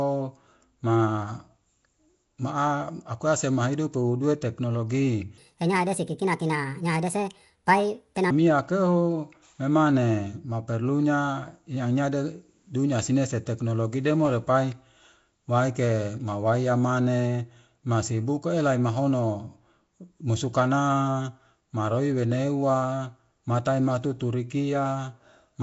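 Nellymoser compression runs through the whole speech recording and is the likely cause of its rough, hissy halo and smeared, underwater tone. Fixed two-bit-per-sample coding starves the weaker bands and refills them with noise, and the damage points to a low bitrate around 32 kbps.

A section at the wrong speed follows from 5.38 to 8.31 s, ending just before "keho emane maperlunya". That stretch plays 1.43 times too fast, so the voice turns hurried and about seven semitones higher, most likely because it was fitted to the wrong clock.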